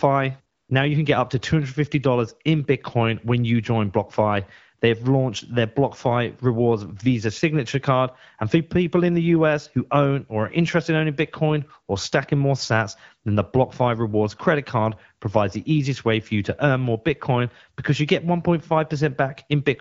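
From 0.55 to 0.69 s, AMR comfort noise fills a 140 ms pause where no speech frames were sent. The real background gives way to a smooth, steady synthetic hiss. Unlike a dropout, the gap isn't silent, and the noise switches in and out abruptly. The surrounding wideband speech sounds clear, fitting a mid-rate HD Voice link.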